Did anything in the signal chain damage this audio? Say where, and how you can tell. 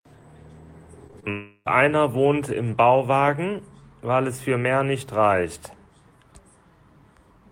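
Yes. The damage sits at the network stage, where the receiver conceals missing packets. Between 1.07 and 1.25 s there are three instances of short concealed packet loss: 1.07–1.11 s, 1.11–1.16 s and 1.20–1.25 s. Each is heard as a brief smear or wobble where the speech momentarily blurs. The gaps run 20, 40 and 20 ms. The decoder patched them with 15, 32 and 25 ms of extrapolated sound, continuing the last waveform before crossfading back to real audio.

Right after that cluster, from 1.31 to 1.68 s, the speech stops advancing. For about 0.35 s the last sound is stretched into a fading buzz or hiss, followed by roughly 50 ms of silence, and the speech then resumes further on. About 0.36 s of the original audio is missing. This is likely a long network dropout, in which no packets arrived for that stretch and the concealment ran out before delivery recovered.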